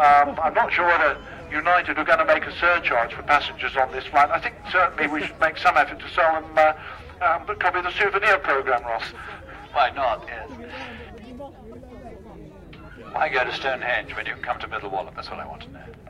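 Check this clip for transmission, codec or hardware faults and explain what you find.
Nothing stands out here, and the sounds in the recording come through without any trouble worth flagging.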